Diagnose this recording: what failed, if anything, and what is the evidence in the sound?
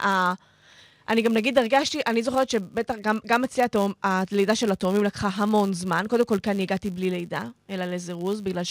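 A filter restarted on every block in the processing stage: a steady 100 Hz buzz runs through the entire speech, rising and falling with its level. The filter starts each 10 ms block from silence, leaving a transient; spectrograms show a 100 Hz harmonic comb, waveforms periodic ticks.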